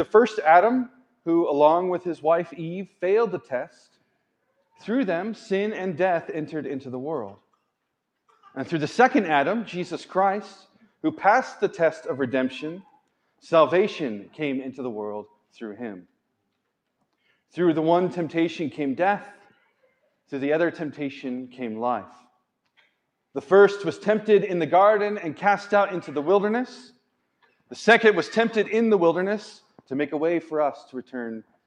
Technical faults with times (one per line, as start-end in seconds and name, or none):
0.88-1.14 sound cut by the noise suppressor